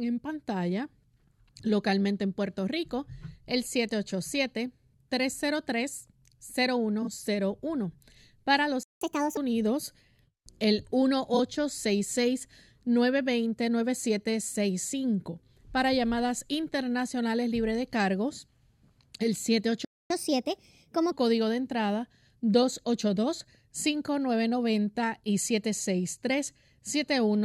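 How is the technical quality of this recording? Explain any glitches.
The recording has three kinds of playback glitch, each occurring twice, spread between 7 and 21 seconds.

Frames out of order, at 7.02–7.08 s and again at 11.34–11.40 s. Two adjacent blocks of audio were decoded in swapped order. Each block is about 23 ms long, which fits single codec frames. For roughly 60 ms, the later block plays before the earlier one. That produces a brief garbled flutter. No time is lost.

Playback stall, at 8.83–9.01 s and at 19.85–20.10 s. The sound cuts out mid-flow for about 0.18 s and then about 0.25 s. The likely cause is that the player's buffer ran dry or its thread was blocked, so output stayed silent until data resumed. Both times, the sound picks up again where it stopped.

Catch-up at higher speed, immediately after each stall. From 9.01 to 9.37 s the audio runs at 1.5× speed, with pitch raised by about seven semitones. 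From 20.10 to 21.12 s it runs at 1.25× speed, raised by about four semitones. The player is resampling its backlog to recover the lost time. The result is a quick, chipmunk-like lift in the speech.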